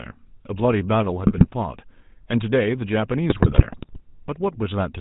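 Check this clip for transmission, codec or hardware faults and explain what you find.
The clip is speech carried over a GSM full-rate codec throughout, with two bursts of GSM bit errors.

GSM full-rate codec, throughout: the coder models the vocal tract and excites it with regularly spaced pulses, keeping only a third of the excitation samples. That thin excitation gives the speech a buzzy, gravelly roughness that is plainly audible, which fits the 13 kbps full-rate mode. On a spectrogram, energy stops sharply at 4 kHz, and harmonics look smeared and grainy rather than cleanly striped.

GSM bit errors, 1.26 to 1.55 s and 3.30 to 4.01 s: corrupted bits reached the decoder, so filter, pitch and gain values were wrong for some frames. The voice breaks into squawks, pops and gargling, and the second burst is longer, suggesting many damaged frames. On a waveform, level spikes appear. On a spectrogram, blocky 20 ms columns show a spectral shape that jumps abruptly from frame to frame.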